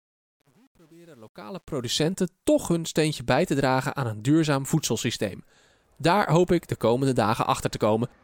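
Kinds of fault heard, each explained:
Truncation distortion on a fade: the speech fade-in up to 2.04 s lacks dither and fits about 9-bit resolution, so from 0.0 to 1.62 s the low level steps coarsely, sounding gritty. Unlike dropouts, the grit follows the fade and clears as level rises.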